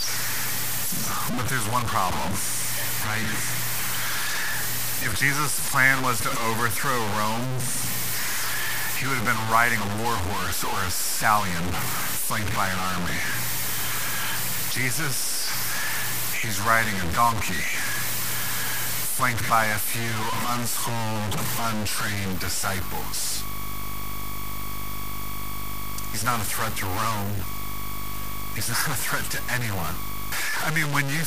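Low bit depth without dither runs throughout the speech: quiet sounds turn gritty and grainy, with distortion roughly as loud as the voice itself, likely from truncating to about 4 bits.

Video or display buzz appears from 22.32 to 30.32 s: a 50 Hz field-rate buzz with hash and a thin 15.6 kHz line tone, sitting around 20 dB under the speech, picked up from a screen or video cable.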